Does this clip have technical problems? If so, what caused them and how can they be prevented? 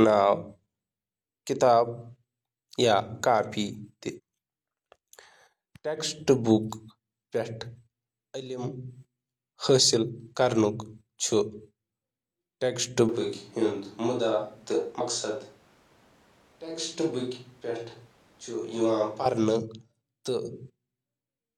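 Yes. Compressed frames skipped at 4.14 s and 14.96 s: playback jumps forward by roughly 200 ms, then roughly 100 ms, losing whole 46.4 ms frames that were missing or rejected as damaged. Each join shows as a sudden break in the harmonic traces on a spectrogram. Verifying file integrity and using error-resilient transfer and storage prevents this.

Switch to a distant microphone from 13.09 s to 19.26 s: the sound abruptly turns hollow and roomy, with thinner bass, a drop of about 5 dB and room noise about 30 dB below the speech. This likely happened because the close microphone dropped out and a farther one took over. The waveform envelope shrinks over a raised noise floor, and the spectrogram shows weaker low frequencies and smeared reverberant tails. Monitoring the close microphone and securing its connection prevents this.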